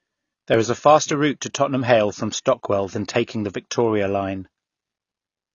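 The whole clip sounds dull and a bit smeared, with a fizzy, warbly edge on sibilants. That's likely AAC compression, and the plainly audible damage fits AAC-LC at a low bitrate around 24 kbps.

At 0.54 s there's a small jump, right before "is a faster route". That points to a dropped buffer (overrun). A sliver of a millisecond or two went missing and the two sides got butted together with no gap.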